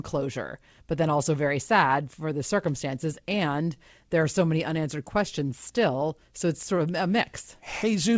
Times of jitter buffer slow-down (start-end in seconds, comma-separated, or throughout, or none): 5.17-5.97